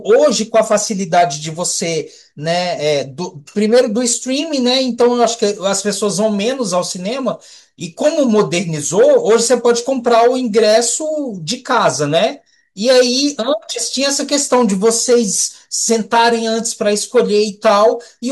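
No dropouts, clipping, glitches or other technical faults are audible anywhere in the speech.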